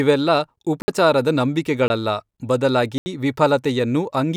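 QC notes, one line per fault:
0.82–0.88 s, 1.88–1.90 s, 2.98–3.06 s: block of digital silence. The speech drops to silence for 60, 20 and 80 ms, with no fade, so the gaps sound like short holes. The waveform shows flat-line gaps, and the spectrogram shows blank vertical strips.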